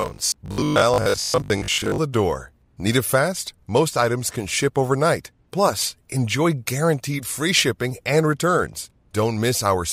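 Speech, with robotic sound from repeated short buffers from 0.02 to 1.98 s. Across this stretch the voice becomes a rigid, metallic buzz at 50 Hz. It still tracks the words loosely. A 50 Hz buzz matches a repeated chunk of about 20 ms. Roughly half of the audio there seems to be repeats rather than new material. The likely cause is audio arriving too slowly, with the player looping its last short buffer to fill the gaps.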